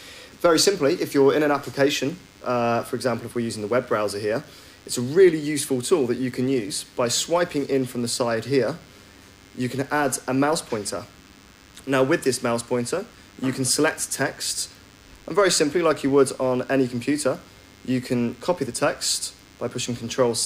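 From start to finish, a DECT cordless phone buzz sits under the sound. A DECT handset or base station close to the recording chain is sending brief radio bursts every 10 ms. The audio circuitry rectifies those bursts and turns them into an audible tone. The result is a steady, thin buzz at 100 Hz, rich in harmonics, so it sounds edgy rather than like a low hum. It stays constant, roughly 30 dB below the main signal.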